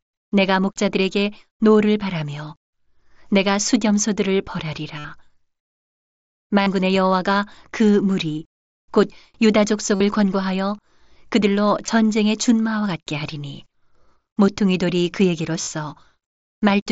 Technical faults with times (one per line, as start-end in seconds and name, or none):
4.98-5.05 concealed Bluetooth headset packet loss
6.62-6.67 concealed Bluetooth headset packet loss
9.95-10.00 concealed Bluetooth headset packet loss
11.86 concealed Bluetooth headset packet loss
15.62-15.67 concealed Bluetooth headset packet loss